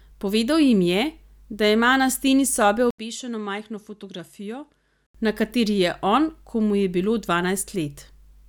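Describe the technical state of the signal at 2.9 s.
At 2.91 s the recording's input likely switched to a poorer device, and the speech stays on it until 5.15 s. An 80 ms silence marks the switch, after which the narrower device passes nothing above 11.9 kHz, so the speech turns duller and boxier. Its level drops by roughly 10 dB, and a new background noise floor sits around 50 dB below the signal. The fuller sound returns at 5.15 s.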